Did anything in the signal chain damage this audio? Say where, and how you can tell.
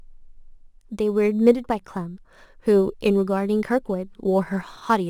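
Yes: crude rate conversion throughout the speech, a gritty inharmonic fizz on louder, brighter sounds about 35 dB down, consistent with nearest-sample repetition converting 44.1 kHz to 48 kHz.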